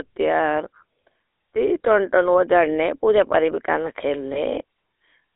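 Throughout, the speech carries the buzzy, gravelly roughness of the GSM full-rate codec, which fits a 13 kbit/s stream. It models the vocal tract and excites it with sparse, regularly spaced pulses. A spectrogram shows energy confined between 300 Hz and 3.7 kHz, with smeared, grainy harmonics instead of clean ones.

At 4.34 to 4.40 s there are lost GSM frames. The gap fits a single 20 ms frame being replaced by the previous good frame's parameters. It sounds like a brief metallic ring. On a spectrogram the pattern freezes for an instant, and the waveform shows a short, repeated segment.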